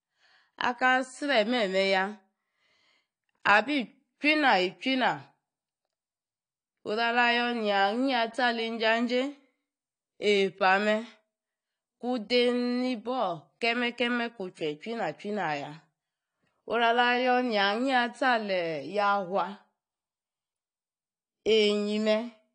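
Low-bitrate audio saved at a high bitrate runs throughout this speech recording: smeared, band-limited artefacts persist, likely from an earlier encoding near 32 kbit/s that the later high-rate MP3 cannot restore.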